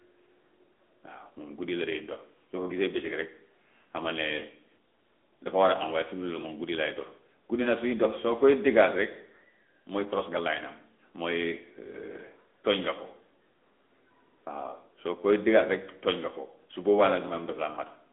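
Speech carrying the AMR narrowband mobile codec throughout: band-limited to roughly 250 Hz to 3.5 kHz with nothing above 3.7 kHz, and plainly audible buzzy, synthetic coding damage from the pulse-driven vocal-tract model, a texture that fits a mid-rate mode around 10.2 kbps.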